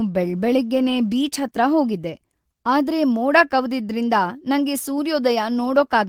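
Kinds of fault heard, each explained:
No technical faults can be heard in this speech.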